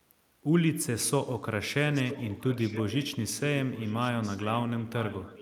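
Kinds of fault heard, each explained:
Echo leak: A delayed copy of the speech returns about 0.96 s late, from 1.93 to 3.11 s and from 3.74 s to the end. It sits well below the direct speech. A far-end loudspeaker's echo canceller likely let it through.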